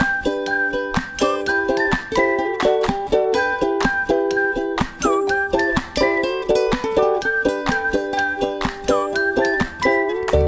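No technical faults are audible anywhere here.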